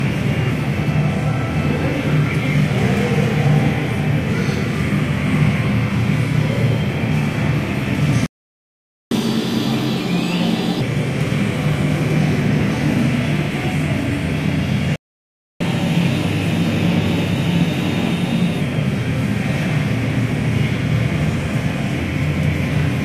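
At 8.26 s the player likely ran short of data or had its output thread blocked, causing a playback stall: the sound cuts out mid-flow and stays silent for about 0.85 s, resuming at 9.11 s. From 9.11 to 10.81 s comes catch-up at higher speed. The player resamples its backlog at 1.5 times normal rate, so everything rushes by and jumps about seven semitones sharp. The same pattern repeats with a second stall from 14.96 to 15.61 s, about 0.65 s of silence, followed by a gentler catch-up from 15.61 to 18.61 s at 1.15 times speed, lifting pitch by roughly two semitones.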